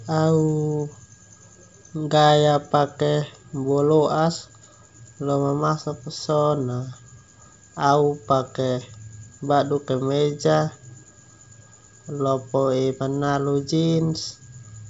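No technical faults can be heard anywhere in the speech. The G.722 wideband telephone coding at 64 kbit/s carries the sound with little or no audible coding damage, and nothing is present above about 7.8 kHz.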